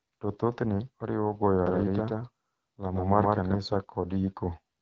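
Throughout, the speech carries AMR wideband (HD Voice) codec damage: a rough, raspy, buzzy texture that fits a low rate around 8.85 kbit/s. The spectrogram shows a hard ceiling with nothing above 7.5 kHz, and the top band is filled with smeared noise rather than clear harmonics.

Just after "thothne oriwo goyo", from 1.67 to 3.57 s, a doubled audio track appears. A second copy, roughly as loud as the first, trails it by about 150 ms. This is likely caused by a duplicated capture path. It sounds like a dry stutter. On the waveform every syllable appears twice, and both edges of the copy are abrupt.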